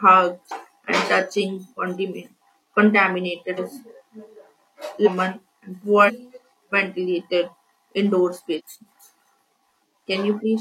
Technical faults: compressed frames skipped

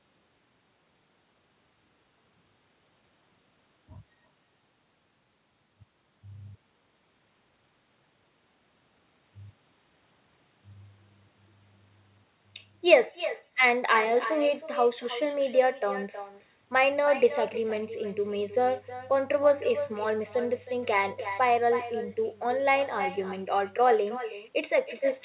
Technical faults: echo with no canceller

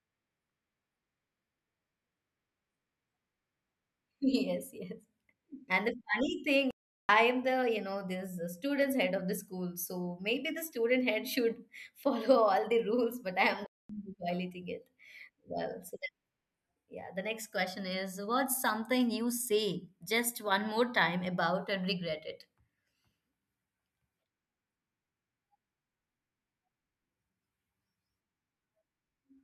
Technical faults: playback stall

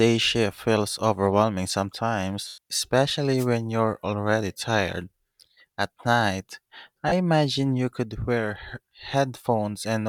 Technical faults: lost LE Audio frames; wireless microphone noise hit

